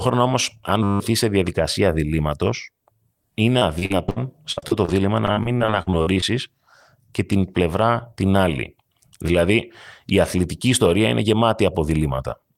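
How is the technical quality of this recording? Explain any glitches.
The recording has clear technical problems: one brief frozen-buffer buzz near the start and two stretches of choppy, robotic-sounding speech in the middle.

From 0.83 to 1.0 s there is a system hang loop. The speech stops and is replaced by a flat, steady buzz. It comes from a 10 ms slice of audio repeating exactly, 17 times, so the repetition rate of 100 Hz is heard as a tone rather than as separate stutters. This happens when the computer or driver stalls while the sound hardware keeps replaying the same short ring buffer. Around 150 ms of real speech is lost under it.

From 3.59 to 4.90 s, and again from 5.26 to 6.24 s, there is repeated packet loss, giving a robotic quality. Dropouts come in quick succession, each patched by stretching the last bit of sound. The longest gaps are 60 ms in the first stretch and 52 ms in the second. 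About a quarter of each stretch is concealed this way, roughly 290 ms and 240 ms of filler, so the speech sounds choppy, with pieces clipped out and a synthetic tone.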